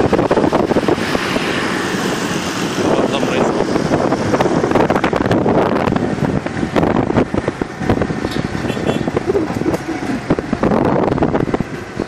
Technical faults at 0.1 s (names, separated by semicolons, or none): none